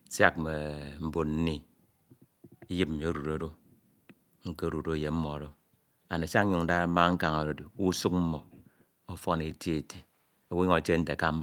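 A recording of speech, with no technical fault to be heard anywhere in it. There is nothing here that needs a time or a cause.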